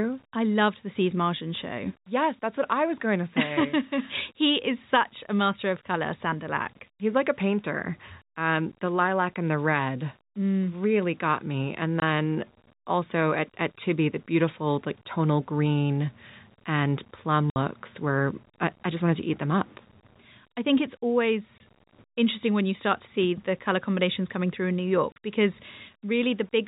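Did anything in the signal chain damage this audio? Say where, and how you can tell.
Yes. Low bit depth without dither runs through the whole speech clip at the sample-format conversion stage. A grainy distortion sits about 35 dB under the signal and tracks its level, and quiet passages turn gritty. That fits 8-bit rounding, likely from rounding without dither.

Packet loss filled with silence comes from the network at 12.00–12.02 s, 17.50–17.56 s (after "tonal green and plum", before "were I I just"), 21.58–21.60 s (before "interesting when you start") and 25.12–25.16 s. The hard-edged holes last 20, 60, 20 and 40 ms. Those lengths are multiples of 20 ms, which points to lost 20 ms packets replaced with silence.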